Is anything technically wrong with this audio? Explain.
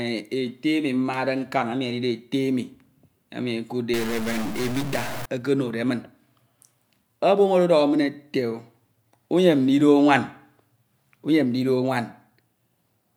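Yes. From about 3.94 to 5.26 s the speech takes on a harsh, buzzy distortion, and the gaps between syllables fill with noise instead of falling silent. This is the signature of a stuck bit, likely from a failed data line or converter. One bit of each sample is held fixed, so about half the sample values are shifted by that bit's weight, a fairly large step of around -25 dBFS. The error pattern follows the waveform, which produces the buzz. Near zero the bit's state also flips with the sign of the signal, which is why the pauses become noisy.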